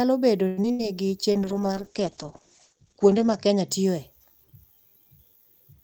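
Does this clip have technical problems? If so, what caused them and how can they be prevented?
Yes. From 0.47 to 0.81 s there's repeated packet loss with a robotic sound: four gaps, the longest 97 ms, patched by stretching earlier audio. Better network links or forward error correction prevent it.

Right after, from 0.81 to 1.07 s, a jitter buffer slow-down adds 35 ms, playing at 89% speed with drawn-out sounds. Steadier delivery helps avoid it.

Then a call bitrate drop, 1.31 to 3.74 s: 32 down to 9 kbps, bandwidth cut from 20 kHz to 8 kHz, so it goes muffled and rough. More reliable bandwidth stops that.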